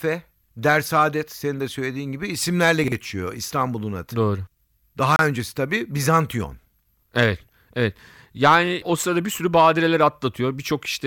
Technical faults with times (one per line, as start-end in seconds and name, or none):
2.84-2.92 chunks out of order
5.16-5.19 Bluetooth stall